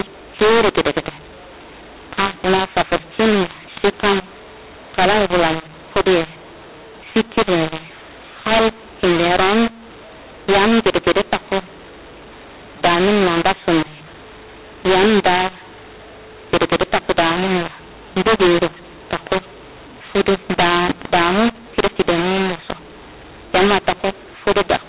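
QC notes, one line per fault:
Throughout: mu-law and A-law mixed up. The speech was coded as A-law but decoded as mu-law, so sample levels get scrambled, some too loud, some too soft, giving a harsh, gritty distortion, and the quiet gaps between phrases fill with noise instead of dropping to near silence. The A-law telephone coding itself is fine, with nothing above 4 kHz, as expected.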